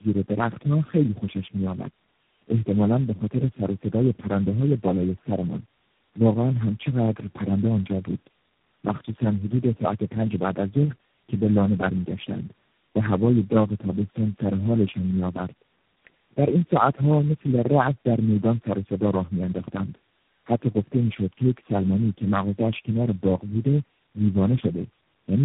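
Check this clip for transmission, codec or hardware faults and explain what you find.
One fault runs through the whole speech clip: tandem speech coding. Repeated decoding and recoding across several narrowband codecs, which points to about four in a row, compounds the damage into rough, muffled, warbly speech. A spectrogram shows nothing above 3.8 kHz and smeared harmonics.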